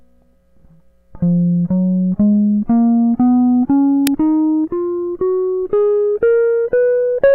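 At 4.07 s a buffer was sent to the output before any audio had been written into it, an uninitialised buffer, so leftover memory was played as samples. In the music this is a sudden, loud crack lasting about 2.7 ms, which fits a 128-sample buffer.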